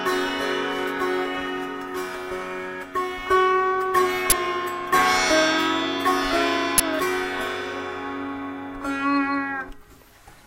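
A short, harsh burst of loud digital noise cuts across the audio from 4.30 to 4.32 s, and a second burst returns from 6.78 to 6.80 s. Both are the fault known as an uninitialised buffer. Each burst fills exactly one 20 ms block, which shows that a whole block went to the output before any audio had been written into it. The playback path then read leftover memory contents as if they were samples, producing sudden garbage instead of sound.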